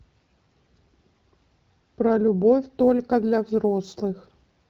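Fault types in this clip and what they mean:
Sample clock jitter: The converter's clock wanders, so samples land slightly early or late. From 2.68 s to the end, a faint hiss and roughness rides on the speech, strongest on loud, bright sounds. It sits roughly 45 dB below the signal.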